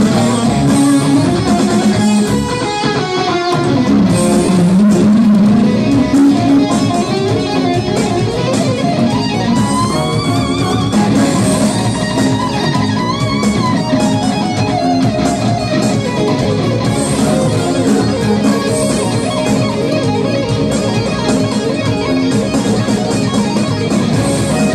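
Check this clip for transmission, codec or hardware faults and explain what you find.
Two short dropouts from lost LE Audio frames, at 4.45–4.49 s and 16.42–16.46 s. Each gap lasts about 30 ms, which fits four consecutive 7.5 ms frames. When frames go missing, the LC3 decoder conceals the gap by repeating the last good spectrum with randomised signs. Over a gap this short, the fade into silence barely starts. Any tonal content turns briefly into a grainy, noisy smear before clean audio resumes. The light lossy compression on the signal is faint underneath these events.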